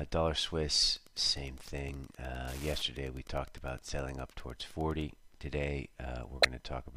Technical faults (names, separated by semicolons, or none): Wi-Fi interference; corrupt frame decoded